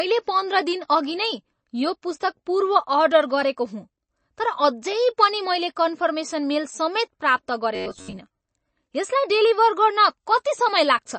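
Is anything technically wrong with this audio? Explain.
Yes, there are two problems.

Throughout the speech, the sound has MP3 compression damage that is plainly audible. The likely cause is a heavily squeezed MP3 encode, which fits a low bitrate around 32 kbps. Short of bits, the encoder cut the treble at 8.3 kHz and kept dropping weak frequency lines in and out, giving a watery, swirling texture with chirpy sibilants. On a spectrogram, everything above 8.3 kHz is empty, and the content below is patchy.

From 7.75 to 8.20 s there is a robotic sound from repeated short buffers. Audio likely arrived too slowly, so the same short slice, about 10.7 ms long, played again and again while most of the real sound in that stretch was skipped. That loop imposes a rigid 93.8 Hz buzz that only loosely tracks the speech. The waveform shows closely repeating cycles, and the spectrogram shows evenly spaced harmonics of 93.8 Hz.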